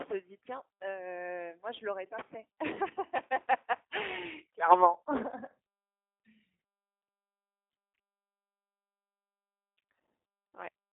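From start to finish the speech has a thin, boxed-in quality: there is nothing above about 3.8 kHz, and the lows below about 250 Hz are gone too. The voice also sounds audibly rough and buzzy, a little synthetic. This is G.729 codec damage, plainly audible. At 8 kbit/s the codec throws the waveform away and rebuilds each short frame from a vocal tract filter, a pitch predictor and a few coded pulses, so breathiness and fine detail come back coarse.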